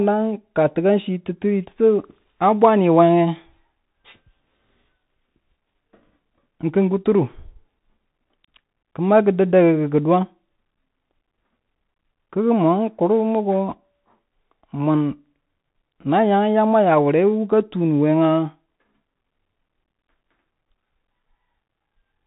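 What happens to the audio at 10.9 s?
At 10.9 s the speech sounds thin and boxed-in, with scratchy s sounds, a granular hiss beneath it, and roughness on louder, brighter moments. The cause is the Bluetooth CVSD headset codec, present throughout the clip rather than only at this point. CVSD sends a single up-or-down bit per sample and adapts its step size, so fast, loud high content outruns the step and distorts. Nothing above about 3.8 kHz survives, which fits a narrowband headset link.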